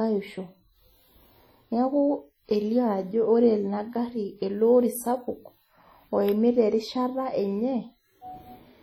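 From start to end the speech carries heavy transform-codec damage, most likely WMA compression at a low rate, consistent with about 32 kbps. Quantisation noise is smeared over tens of milliseconds around each syllable, so onsets ring and the tail of each sound turns washy. Quiet spectral detail has been discarded, leaving a thin, swirling quality, and a hiss rises and falls with the level. Content still reaches about 20.1 kHz.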